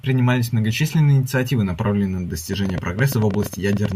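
Right after "многочисленные инициативы направленные на", from 2.53 to 3.93 s, a train of clicks ticks over the speech at about 10.8 per second, unevenly spaced, around fifteen sharp pops standing roughly 10 dB above the voice, likely from interference or a faulty connection or power supply.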